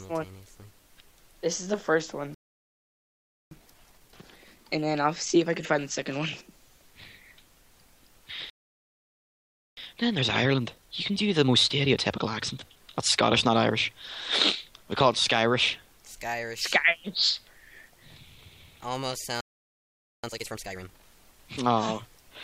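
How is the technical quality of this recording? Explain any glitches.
The recording has three playback stalls, and each is followed by a stretch of time-compressed catch-up.

Playback stall: the audio drops to silence mid-flow three times. The gaps run from 2.34 to 3.51 s (about 1.17 s), from 8.50 to 9.77 s (about 1.27 s) and from 19.41 to 20.24 s (about 0.83 s). The likely cause is that the player ran out of data or had its thread blocked, so nothing reached the output until it recovered.

Time-compressed catch-up: after each gap the sound returns hurried but at its normal pitch. It plays at 1.25 times speed from 3.51 to 6.51 s and again from 9.77 to 12.77 s, then at twice speed from 20.24 to 21.06 s. The player is clearing the backlog left by the stall by removing small pieces of audio and cross-fading across the joins. This shortens the material without shifting pitch, and the final 2x stretch is the most rushed.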